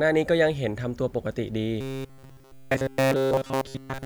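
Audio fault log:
1.81 to 4.05 s, robotic sound from repeated short buffers: from 1.81 s to the end, the speech turns into a rigid, metallic buzz at about 134 Hz that still roughly tracks the words. The likely cause is new audio arriving too seldom, so playback keeps looping the last fragment while the real audio is skipped. A 134 Hz buzz points to a fragment about 7.5 ms long, and essentially all of this stretch is repeats.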